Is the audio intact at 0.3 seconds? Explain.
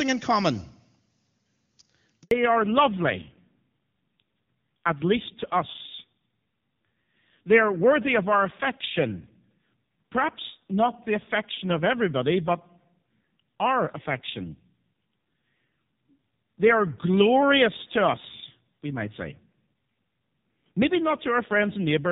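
Yes, the audio is intact at 0.3 seconds: the speech there carries no fault, and the AMR wideband (HD Voice) coding at 23.85 kbit/s, a rate at which this codec keeps speech clear, leaves at most faint codec damage.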